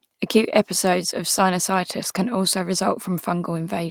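A short speech recording, and nothing in it stands out as a technical problem; there's no fault to point to anywhere along the way.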